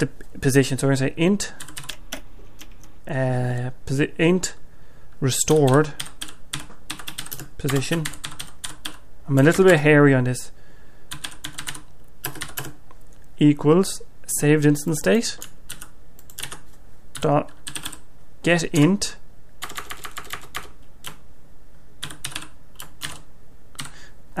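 From 1.90 to 2.98 s, the audio is read two samples at a time: the playback path treats each pair of samples as a single frame, as if the stream had two channels or samples twice as wide. The sound therefore runs at 2x speed and jumps up 12 semitones, a full octave, for just over a second.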